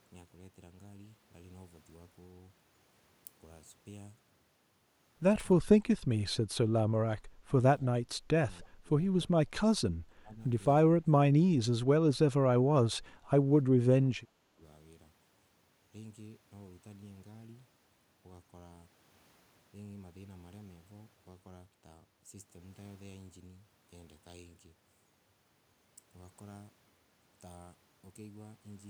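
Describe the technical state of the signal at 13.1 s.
At 13.1 s the speech sits inside a stretch of speech suppressed in double talk, running from 11.96 s to 13.30 s. The level drops by as much as about 20 dB, for roughly 0.7 s in total across that span. The likely cause is an echo canceller that could not separate the near talker from loudspeaker echo while both sides spoke, so it attenuated both. On a waveform the envelope visibly shrinks, and a spectrogram shows the speech energy fading across the band.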